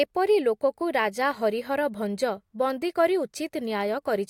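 No dropouts, clicks, distortion or other transport or processing faults turn up anywhere in the recording.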